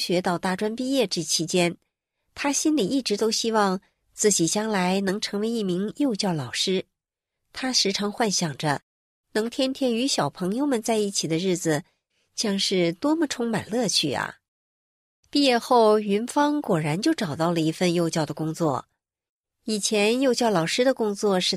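No technical faults are audible anywhere in the speech recording.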